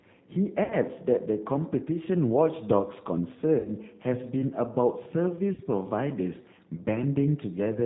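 Throughout, the speech carries the G.729 codec's 8 kbit/s sound: nothing above 4 kHz, and a rough, slightly synthetic texture from pulse-coded excitation. The damage is plainly audible. Unlike generic low-bitrate blur, the reduced top end is a hard 4 kHz limit.

At 0.64 to 0.76 s and 3.59 to 3.72 s, VoIP packet loss concealed by the speech codec stretches the speech into a buzzy tone or coloured noise that fades, consistent with about 60 ms lost each time, likely three 20 ms packets. At 5.54 to 5.61 s a shorter loss, around 40 ms, does the same. Unlike a dropout, each gap is filled rather than silent, and the speech stays weak briefly after packets resume.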